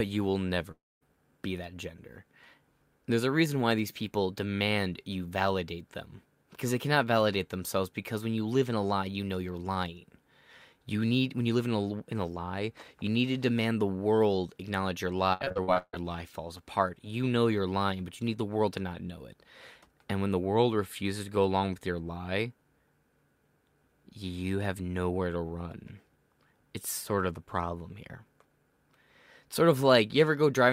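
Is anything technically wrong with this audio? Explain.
Yes, the speech has two faults. A long network dropout is the likely cause of the gap from 0.71 to 1.03 s, after "you will". About 300 ms never arrived. The last sound was extended as a fading buzz, leaving about 220 ms of near-silence before "be that gender" resumes. On a waveform this shows as a tapering smear into a flat trace.

Repeated packet loss (robotic sound) runs from 15.33 to 15.97 s, between "the world acknowledge your" and "lie falls apart". Eight holes, the longest 151 ms, were each patched by repeating recent sound, concealing about 56% of the span. It sounds choppy, with pieces missing, and a spectrogram shows repeated smeared blocks.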